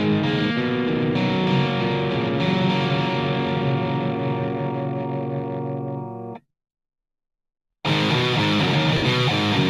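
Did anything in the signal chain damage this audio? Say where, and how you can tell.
Yes. The damage is on the Bluetooth link, which lost LE Audio frames near the end, from about 8.97 to 9.02 s. For roughly 45 ms the sound turns into a noisy smear instead of its proper detail. That gap fits about six 7.5 ms frames dropped in a row. The LC3 decoder filled the hole by replaying its last spectrum with scrambled signs, fading it as the run went on. The light codec compression elsewhere in the clip just sounds like ordinary lossy coding.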